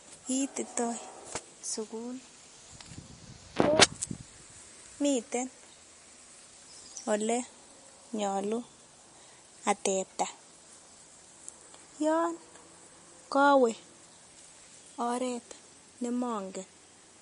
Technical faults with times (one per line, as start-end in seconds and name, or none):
0.00-17.22 MP3 compression